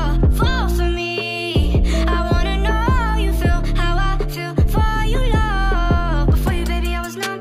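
From 0.13 s to the end, clock slip clicks form a soft rattle roughly every 30 ms, likely one-sample slips from unsynchronised clocks drifting several hundred ppm apart.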